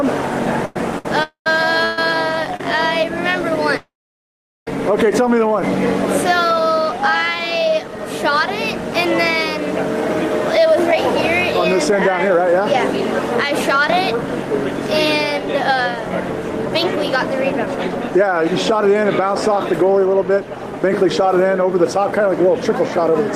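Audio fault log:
0.65–2.60 s, repeated stalls (stutter): packets arrived late or too slowly, so the jitter buffer ran dry four times. The receiver stretched the last sound across 320 ms in total, the longest gap 127 ms. Nothing is lost, but the audio drags and stutters.
1.23–1.47 s and 3.77–4.68 s, call audio freeze: the sound hangs on its last moment, fades, then sits silent for about 0.11 s and 0.77 s before resuming exactly where it stopped. This adds 0.23 s and 0.90 s of delay with nothing lost, likely from packets held up in transit emptying the jitter buffer.
3.01–5.61 s, jitter buffer slow-down: with its reserve running low, the receiver repeated single pitch periods and slivers of pauses to rebuild it, adding 53 ms. Playback runs at 98% speed with unchanged pitch, so sounds are slightly drawn out.
10.58–23.2 s, jitter buffer speed-up: the buffer was holding more than its target, so the receiver trimmed short pitch-period pieces again and again, removing around 0.4 s overall. 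The audio runs at 103% speed with pitch intact.
17.66 s, short concealed packet loss: 10 ms of audio never reached the decoder in time. The receiver bridged the hole with 4 ms of continued sound before blending back, heard as a brief smear or wobble at that instant.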